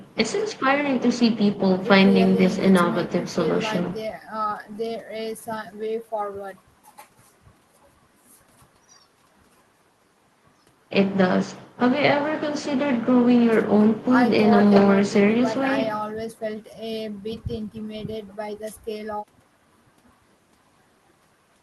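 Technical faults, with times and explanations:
No technical faults detected.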